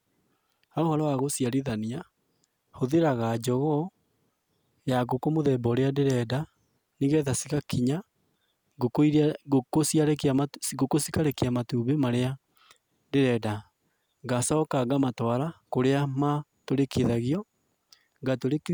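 Electrical switching spikes at 6.10 s and 11.31 s cut across the speech as sharp, momentary snaps, the first peaking around -20 dBFS and the second somewhat quieter. A nearby switch, motor or static discharge likely arced, and the audio line picked up each burst.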